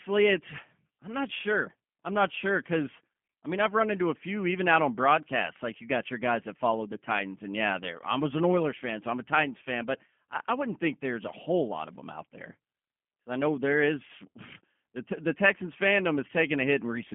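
Speech passed through a G.729 codec, fitting an 8 kbit/s low-rate stream, so the whole clip is band-limited to about 200 Hz to 3.4 kHz, nothing above 3.5 kHz, with a plainly rough, synthetic texture.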